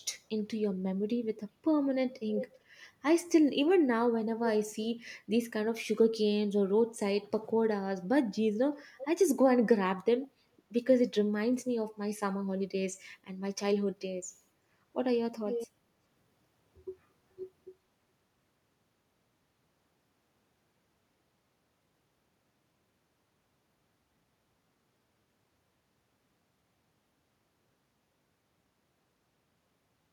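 At 2.29 to 2.5 s, 8.98 to 9.05 s and 15.47 to 15.67 s, short scraps of echo leak appear: a copy of the speech returning about 390 ms late, likely from a loudspeaker at the far end whose echo canceller let some of its microphone pickup back through. It is fairly quiet at first, fainter at 8.98 s, and loudest at 15.47 s. Unlike room reverberation, it is a distinct, delayed repeat rather than a smooth tail.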